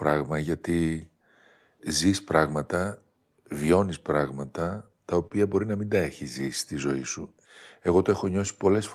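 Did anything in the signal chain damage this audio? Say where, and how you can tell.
Yes, at the network stage. Around 5.27 to 5.33 s the speech hangs on one sound for about 38 ms with a slight buzz or dip: a short stall from a late packet. The jitter buffer ran dry, the receiver stretched the last sound until the packet showed up, then carried on with nothing lost.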